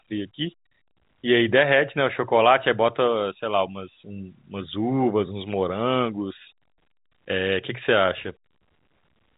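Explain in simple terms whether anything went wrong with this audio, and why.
Nothing went wrong; the speech sounds as it should.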